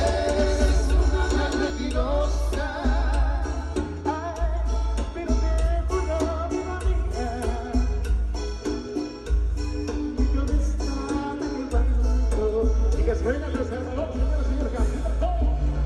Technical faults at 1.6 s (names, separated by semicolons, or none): doubled audio track